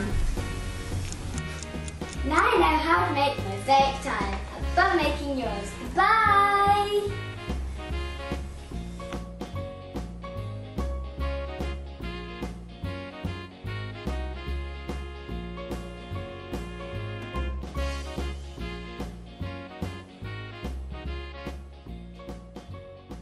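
At 17.62 s the sound abruptly loses level, falling by about 6 dB for a brief 50 ms before snapping back at 17.67 s. It is heard as a quick dip or hole in the sound rather than a click. The likely cause is one channel dropping out: one side of the stereo pair went silent for that moment, so the mono sum kept only half of the shared content.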